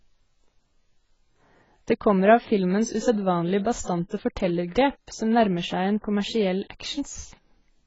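From start to finish the speech carries heavy AAC compression damage, likely from AAC-LC at a low bitrate. Nothing survives above 7.7 kHz, so it sounds dull and smeared, with fizzy, warbling sibilants. A spectrogram shows a hard ceiling and patchy bands beneath it.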